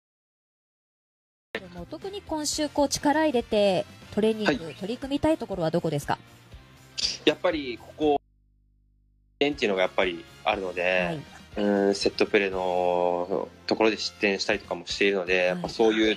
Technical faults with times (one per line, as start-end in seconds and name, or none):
0.00-1.55 cut-off start
8.17-9.41 audio dropout to a faint residue